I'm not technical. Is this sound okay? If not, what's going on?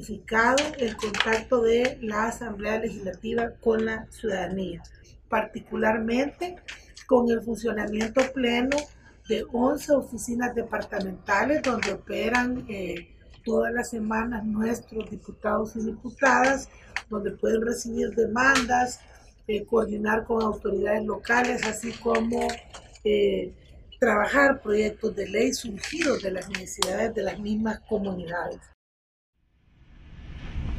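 Yes, there's nothing technically wrong with this sound that a listener would notice.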